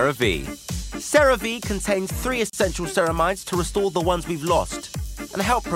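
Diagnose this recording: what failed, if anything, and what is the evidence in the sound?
The failure is at the codec stage: a gap at a join of encoded pieces. At about 2.50 s the continuous sound drops out for roughly 35 ms, to 2.53 s, then resumes where it left off. Both edges are smeared by the codec. Separately encoded chunks were butted together without trimming, so one run's end padding and the next run's start-up delay both stayed in. The joins repeat every 6 s, so only this one falls in the clip.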